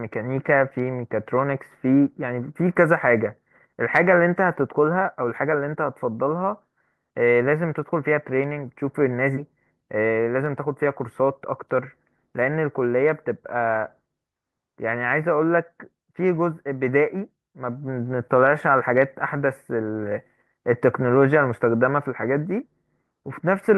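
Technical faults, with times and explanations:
9.37 to 9.39 s, skip ahead: Playback jumps forward with no filler, dropping roughly a second of speech when audio was dropped while later audio was already queued. The two sides of the cut are butted together, so the sentence lurches abruptly instead of pausing. On a waveform the envelope changes shape instantly, with no silent gap. A spectrogram shows harmonic tracks and formants breaking off and restarting at unrelated positions along a single vertical seam.
9.75 to 11.76 s, jitter buffer speed-up: Right after the skip, the receiver still held more audio than it wanted. It trimmed short pitch-period pieces, roughly 150 ms in total, many times in a row. The speech runs at about 106% speed with unchanged pitch and sounds slightly hurried. A spectrogram shows harmonic spacing unchanged but syllables and gaps compressed in time. A waveform shows shorter pitch-cycle trains with no visible splices.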